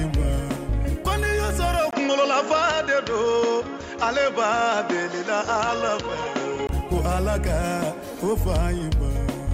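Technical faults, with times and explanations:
1.91–6.69 s, input switched to a poorer device. A 20 ms gap opens the section. The sound then turns dull, with nothing above 7.3 kHz, and a faint new noise sits about 40 dB down. Loudness barely changes. A narrower-band input likely took over, then handed back.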